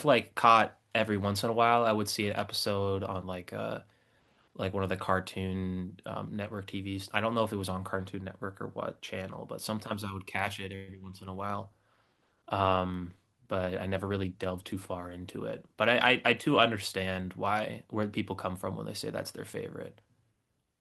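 At 10.75 s the speech stops moving forward for about 124 ms, until 10.90 s. The last sound is stretched into a brief fading buzz or hiss rather than silence. A call audio freeze is the likely cause. Delayed packets emptied the jitter buffer, so a gap was inserted and nothing was lost.

From 11.28 s to 16.77 s the speech turns coarse and watery, with the top end dulled. This is a call bitrate drop. The bandwidth estimate fell, and the encoder was pushed to far fewer bits. The sound fits a fall from around 64 kbps to around 22 kbps.

Inside that stretch, from 13.67 s to 14.75 s, the speech runs fast, at 111% speed with its pitch unchanged. This is a jitter buffer speed-up. The buffer held too much audio, so the receiver cut repeated short pitch-period pieces, about 150 ms in total.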